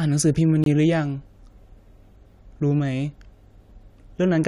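A speech clip with one corrupt frame muted: a compressed frame arrived with flipped bits, the decoder rejected it, and silence was substituted. The sound drops abruptly to nothing from 0.64 to 0.66 s, a gap whose length fits a single lost frame, with timing preserved.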